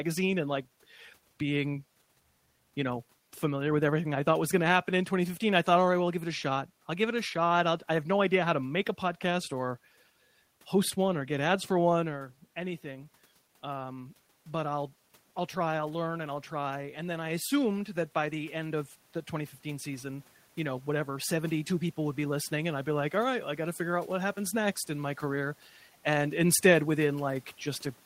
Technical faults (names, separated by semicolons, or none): automatic gain rising